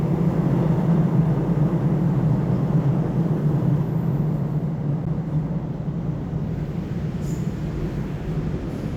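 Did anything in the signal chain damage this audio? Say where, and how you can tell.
Yes. At 5.05 s, in the playback stage where the stream is reassembled, there is a gap between stream segments. The sound stops dead for about 12 ms with hard edges on both sides, then resumes exactly where it left off. The timestamps of two adjacent segments don't quite meet, so the player pads the hole with digital silence. Nothing is skipped, which sets it apart from network packet loss, where material goes missing.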